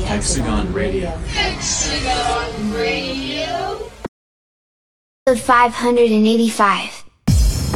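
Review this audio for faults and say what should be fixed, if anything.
There's an audio dropout to silence from 4.07 to 5.27 s: about 1.2 s of silence with no room tone, likely from a lost input connection. Secure cables and watch input meters while recording.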